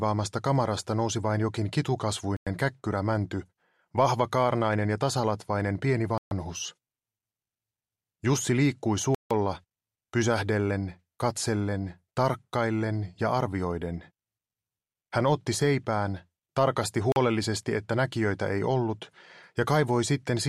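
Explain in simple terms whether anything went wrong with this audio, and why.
The audio cuts to silence four times: at 2.37 s for 0.10 s, 6.18 s for 0.13 s, 9.15 s for 0.16 s, and 17.12 s for 0.04 s. These gaps are likely a Bluetooth stall, where wireless interference delayed data and the headphones ran out of audio to play.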